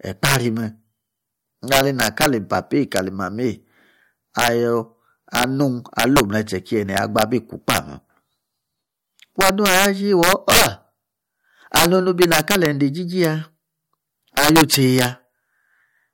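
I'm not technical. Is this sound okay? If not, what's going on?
No. The speech has integer overflow throughout: on the loudest moments, the signal exceeds the biggest number the system can hold and wraps around to the opposite extreme. That produces sudden violent cracks, much sharper than clipping's flattened fuzz, on the peaks, affecting a small fraction of the sound.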